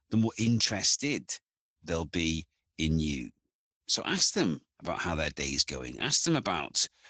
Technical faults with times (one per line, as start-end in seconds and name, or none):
0.00-7.10 Opus voice compression